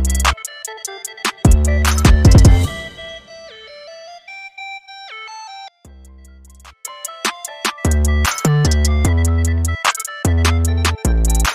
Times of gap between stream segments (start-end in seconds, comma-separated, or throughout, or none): none